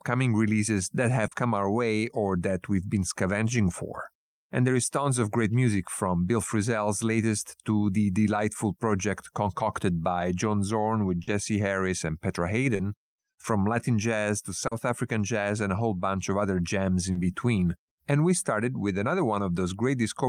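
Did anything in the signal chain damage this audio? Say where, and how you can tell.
Yes. Short concealed packet loss at the network stage: brief smears at 1.27, 11.23, 12.75, 14.67 and 17.11 s, the first between "releases that" and "come our way or". In each, about 40 ms of audio never arrived, and the decoder filled the gap by extending the preceding sound. A spectrogram shows frozen, smeared harmonics, and the waveform shows repeated pitch periods.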